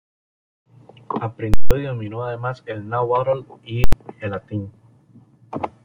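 Invalid numbers at full scale hit at 1.54 to 1.71 s, before "y dominó además el", and at 3.84 to 3.93 s, between "además el náhuatl y" and "el latín". A calculation produced infinite or invalid values that were pinned to maximum level for a whole processing block, about 171 ms and 85 ms long, which fits blocks of 8192 and 4096 samples. Each is heard as a loud pop on entry and exit with silence in between.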